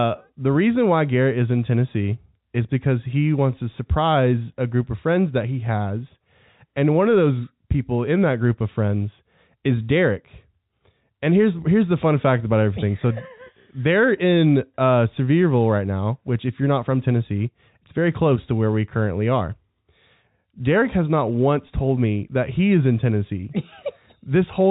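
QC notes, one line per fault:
No faults to note for this speech clip, which comes through a working call path with its audio band ending at 4 kHz.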